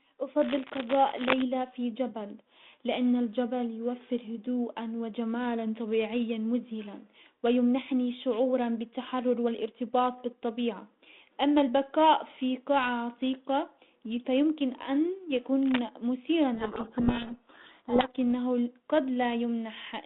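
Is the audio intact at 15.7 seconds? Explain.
No. Right after "قاعة عتيقة فيمكن ان", cable scratch noise runs from 15.63 to 15.82 s: a loud, ragged scratching, likely a worn contact whose resistance flickered. It appears as dense, irregular broadband spikes on the waveform and spectrogram.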